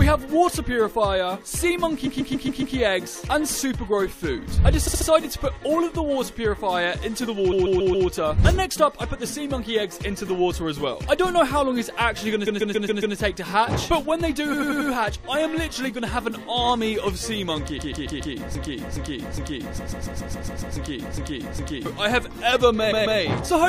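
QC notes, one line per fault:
2.06–2.75 s, 4.87–5.07 s, 7.51–8.07 s, 12.46–13.16 s, 14.52–14.90 s, 17.78–18.33 s, 19.77–20.75 s, 22.91–23.19 s, repeated frames: compressed blocks of 139.3 ms (69.7 ms and 92.9 ms at 4.87 and 14.52 s) were written again, so the same fragment replays as a stutter.
18.55–21.86 s, broken-record loop: a 412 ms fragment repeats exactly, back to back, six times while the sound due in that span never arrives, likely from a stalled player or stream resending its last buffer.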